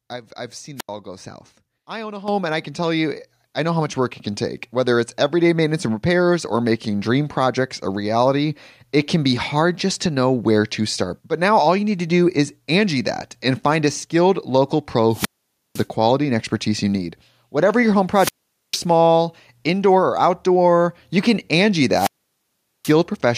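At 0.76 s a wireless microphone squelch dropout occurs. The analogue radio link fades, static swells briefly, then the receiver's squelch mutes the output for about 82 ms before the speech returns. The rise of hiss before the gap is what separates it from a plain digital dropout.

At 2.28 s the microphone volume is stepped up by about 9 dB in a single jump. The call software raised the input gain, so speech and background noise get louder together and stay there. There is no hiss and no gap.

Further squelch dropouts follow at 15.1 s, 18.1 s and 21.9 s, with mutes of roughly 0.5 s, 0.45 s and 0.78 s. Each is preceded by a burst of static.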